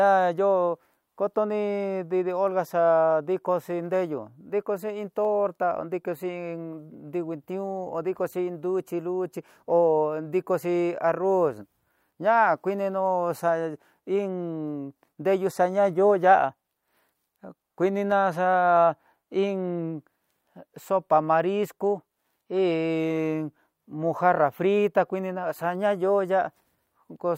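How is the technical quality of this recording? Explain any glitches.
Two brief glitches mar the speech, at 5.25 s and 18.12 s: each is a single sharp click, most likely dropped samples, a handful missing so the waveform jumps abruptly, showing as a thin vertical spectrogram line.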